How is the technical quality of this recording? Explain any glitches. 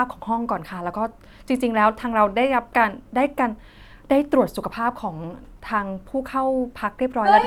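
Nothing in the recording stood out as a technical problem on listening, so there are no glitches to explain.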